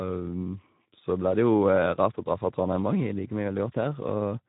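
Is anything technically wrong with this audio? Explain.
Yes. Throughout, the speech sounds plainly hoarse and noisy, with nothing above 3.9 kHz. This is Speex codec damage: the CELP coder gets too few excitation bits, consistent with a low setting of about 11 kbps.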